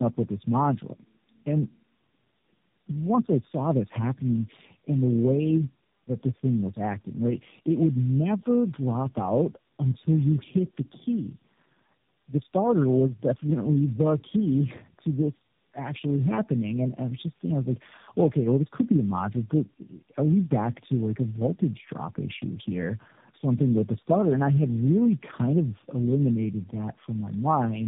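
From start to finish, the speech has passed through several speech codecs in series, a fault called tandem speech coding. Each link decoded the call and compressed it again, so every coder worked on its predecessor's damage. The roughness and warble fit three low-rate coders in a row, consistent with G.729A twice and AMR-NB at 10.2 kbit/s. Speech sounds gritty, muffled and wobbly, with nothing above 3.7 kHz.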